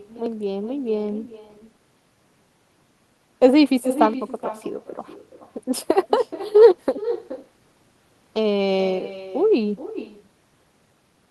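From start to finish there's echo with no canceller: a thinner copy of the speech returns roughly 0.4 s later, about 13 dB down, looped back through the far end's loudspeaker and microphone.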